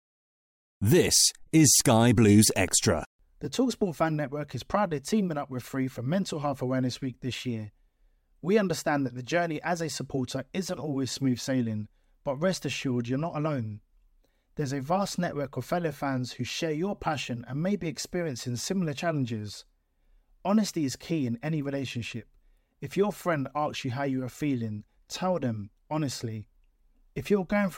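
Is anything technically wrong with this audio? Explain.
Yes. Between 2.50 and 2.70 s there is a loud pop, heard as two sharp thumps in quick succession, a little louder than the speech peaks, while the speech continues underneath. The likely cause is a sudden voltage step or pulse, as from a plug, switch, static discharge or driver glitch, which the following circuitry shapes. On a waveform it shows as two tall spikes standing out from the speech. A spectrogram shows two thin vertical stripes spanning the frequency range.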